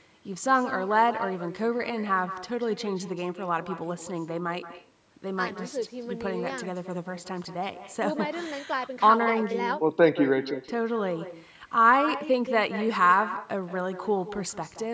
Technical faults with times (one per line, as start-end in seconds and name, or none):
0.00-14.94 echo with no canceller